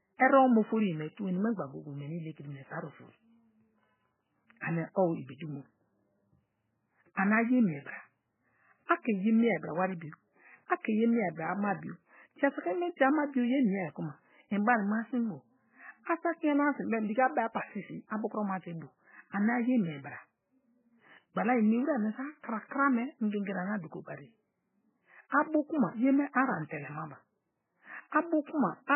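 Right through the speech there's heavy MP3 compression, likely at a very low bitrate: nothing above 3 kHz survives, and the starved bands swirl and warble as weak detail flickers in and out.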